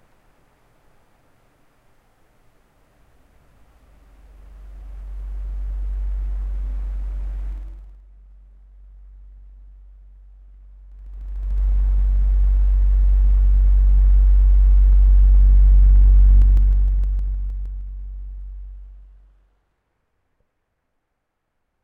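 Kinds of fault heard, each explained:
zipper noise: the level is changed in 2 dB steps without smoothing, so each jump leaves a small click. Three moves of roughly 20 dB, starting at 7.50, 10.88 and 16.34 s, tick audibly, their step rate slowing from around 20 per second to about 7.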